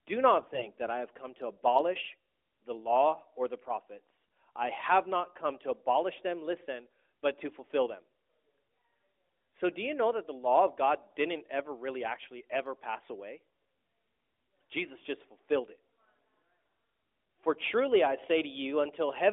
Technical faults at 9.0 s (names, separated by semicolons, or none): none